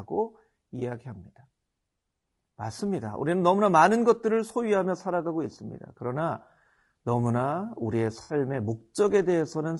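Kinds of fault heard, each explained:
Low-delay AAC compression: the speech is plainly rough and grainy throughout, with noise between harmonics, likely from short-frame AAC-ELD coding at a bitrate near 32 kbps.
AAC frame loss with concealment: missing frames rebuilt from the last good spectrum give smeared, noisy patches, 20 ms at 0.79 s and 60 ms at 8.23 s.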